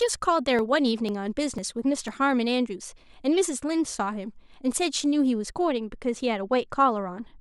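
Right at the start, from about 0.09 s to 2.08 s, there are periodic USB or driver dropouts. Every 0.5 s or so, something blocks the audio path and a sliver of the speech, a few milliseconds, just gets skipped rather than padded with silence. You get about five evenly spaced little ticks riding on the speech, and because a skip during silence leaves no audible jump, they only poke through where sound is actually present.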